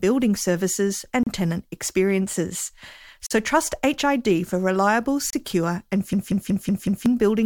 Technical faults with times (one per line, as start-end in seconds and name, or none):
1.23-1.27 gap between stream segments
3.26-3.31 gap between stream segments
5.30-5.33 gap between stream segments
6.13-7.06 system hang loop